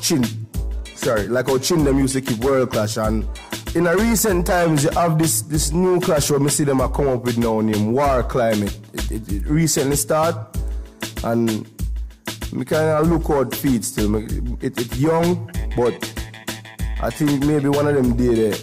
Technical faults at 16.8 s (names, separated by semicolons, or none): none